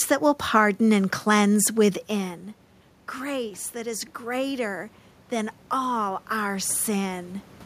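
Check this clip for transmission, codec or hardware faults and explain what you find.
There is one system fault: automatic gain rising. The talker moves away from the microphone at around 2 s, lowering the input by about 13 dB. From 3.16 to 7.35 s the gain control slowly adds about 6 dB. Voice and room noise swell together, and only part of the lost level comes back.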